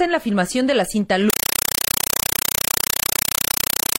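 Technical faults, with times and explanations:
1.30 s to the end, compressed stream played as audio: undecoded AC-3 data is played as samples, giving very loud, chattering static. Noise bursts of 5.33 ms repeat 31.25 times a second with zero padding between, which fits a 256 kbps stream. The waveform shows loud blocks separated by flat gaps, and the spectrogram shows broadband vertical stripes.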